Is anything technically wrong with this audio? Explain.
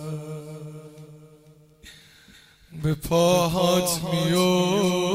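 Yes. Clock drift between sender and receiver runs throughout: the sending clock is about 5 percent faster than the receiving one, so the jitter buffer keeps overfilling and the receiver must keep discarding audio to hold its delay steady. This leaves small recurring hiccups across the whole clip.

Repeated timing corrections run from 0.07 to 5.14 s, with the stream pushed to 105 percent speed. The receiver keeps cutting short pieces out, always in the same direction but at uneven spacing, so the sound moves with a slightly rushed, unsteady tempo and faint skips.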